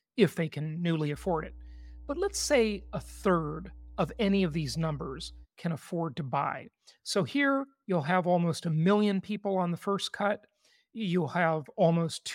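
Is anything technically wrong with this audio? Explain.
Yes. Mains hum runs from 1.13 s to 5.47 s, starting just after "if they can newly" and clearing before "can afford to buy". It is a steady low tone at 60 Hz, sitting about 20 dB below the speech. Some low harmonics come with it. The power line is leaking into the signal path, through a ground loop or a nearby transformer. The result is a constant buzz under the voice for those 4.3 seconds.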